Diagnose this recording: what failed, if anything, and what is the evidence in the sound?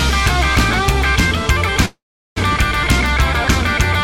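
At 1.85 s the sound smears into a fading buzz, goes silent for about 0.38 s, then picks up at 2.38 s with nothing skipped. That's a call audio freeze at the network stage, likely delayed packets draining the jitter buffer, so everything afterward runs about 0.5 s late.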